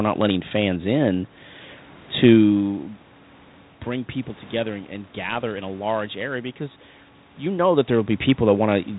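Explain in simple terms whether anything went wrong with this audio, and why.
Nothing went wrong here; no technical faults can be heard.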